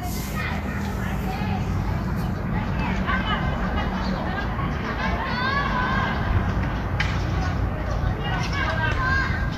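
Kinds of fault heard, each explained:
Vorbis compression: The audio has a hissy, grainy texture throughout, with roughened tones and softened attacks. Nothing is heard above 14.2 kHz. This is likely low-bitrate Vorbis coding. The encoder keeps a smooth outline of the spectrum and spends few bits on the detail riding on it. Fine treble detail becomes noise of similar energy. The damage is plainly audible, which fits a rate of roughly 35 kbps.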